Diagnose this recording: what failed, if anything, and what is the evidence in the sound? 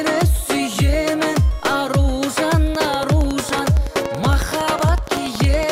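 A train of clicks runs from 2.75 s to 5.64 s. The pulses come at a steady 10.8 per second, around thirty in all. They peak well above the sound. The even spacing likely points to interference coupling into the analogue wiring.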